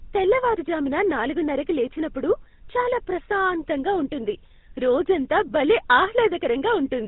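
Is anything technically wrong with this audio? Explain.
Yes. Throughout the speech there is GSM full-rate codec damage, plainly audible. The codec models the vocal tract as a filter and drives it with a coarse train of regularly spaced excitation pulses, discarding two of every three excitation samples. The result is a buzzy, gravelly roughness layered onto the voice, with nothing above 4 kHz. Simple telephone band-limiting would sound muffled but smooth; here the grainy buzz is what gives it away, and it fits a 13 kbps GSM stream.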